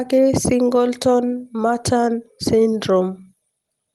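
Speech heard over a WebRTC call path whose top end rolls off near 12 kHz, consistent with an Opus stream, and the signal shows no technical faults.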